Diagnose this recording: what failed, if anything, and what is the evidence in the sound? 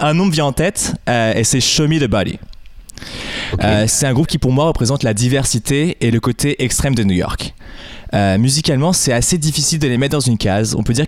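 Nothing failed in this recording, and no stage of the chain leaves audible evidence of a problem. From capture through to playback, the sound gives no sign of a fault.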